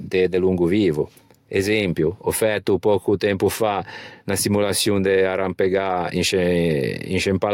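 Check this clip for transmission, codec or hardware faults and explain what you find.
No transmission, codec or hardware fault can be heard anywhere in the speech, and the signal stays continuous and stable throughout.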